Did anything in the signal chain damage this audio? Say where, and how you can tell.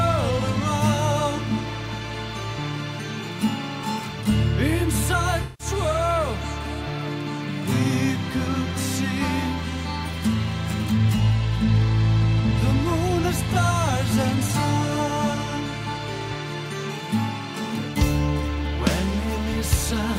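Yes. AAC frame loss with concealment damaged the audio at the codec stage, from 5.42 to 5.67 s. The sound turns smeared and noisy for about 170 ms because the decoder rebuilt the gap from the last good spectrum, which fits roughly eight lost frames.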